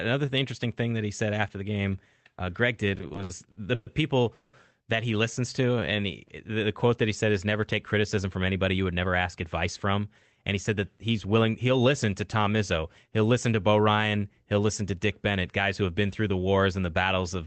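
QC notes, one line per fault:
2.95–3.88 s, repeated stalls (stutter): packets kept arriving late, so the jitter buffer ran dry nine times, the longest wait about 120 ms. The receiver stretched the last sound through each gap, about 290 ms in all, nearly a third of the span, so the speech drags and stutters while losing nothing.
4.34–4.55 s, call audio freeze: likely a hold-up of packets in transit emptied the jitter buffer, and the receiver carried the last sound on as a fading buzz for about 190 ms before resuming just before "that he listens", adding a gap rather than dropping audio.
5.74–6.02 s, jitter buffer slow-down: with the buffer running low, the receiver repeated single pitch periods to build a reserve, adding about 37 ms. The speech plays at 90% speed with unchanged pitch, so sounds are drawn out.
8.17–9.22 s and 15.37–15.89 s, jitter buffer speed-up: the buffer held more than its target, so the receiver trimmed short pitch-period pieces, around a tenth of a second after "said is never take" at 109% speed, and a few hundredths before "been through the wars" at 106%. 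The speech runs faster and sounds hurried at the same pitch.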